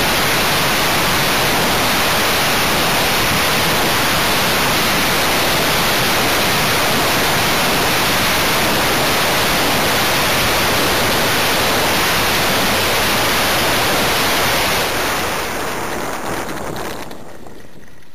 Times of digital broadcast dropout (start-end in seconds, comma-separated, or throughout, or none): none